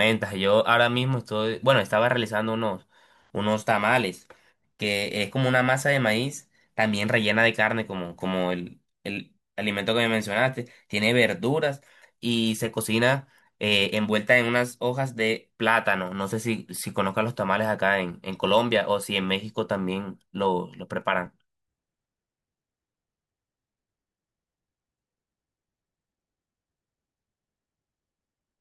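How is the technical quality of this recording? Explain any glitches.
The recording has two brief glitches, at 21.26 s and 27.93 s, each likely a dropped buffer (overrun): samples were overwritten before being read, splicing the audio together, heard as a jump in the sound with a skip of a few milliseconds.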